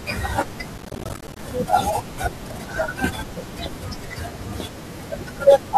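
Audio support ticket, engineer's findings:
Processor overload crackle in speech, 0.74–1.42 s. Gritty burst; CPU missing deadlines on buffers of around 10 ms, dozens of short silent gaps with hard edges.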